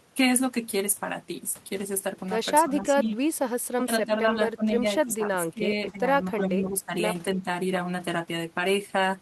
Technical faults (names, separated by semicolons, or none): speech suppressed in double talk